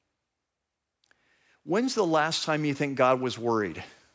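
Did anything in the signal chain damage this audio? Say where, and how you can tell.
Yes: the call processing's automatic gain rising, from 1.63 to 3.79 s, adds about 6 dB, so the speech and background swell together gradually.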